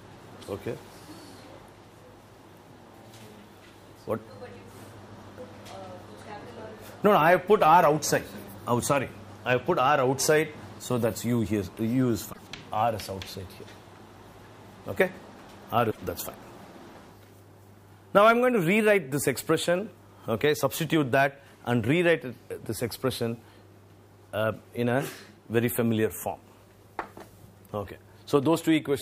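Three short glitches break into the audio, at 5.21 to 5.23 s, 12.32 to 12.39 s and 15.87 to 15.98 s. These point to damaged data in a compressed stream: corrupted bytes make the decoder misread frames and lose sync until it finds the next valid frame header.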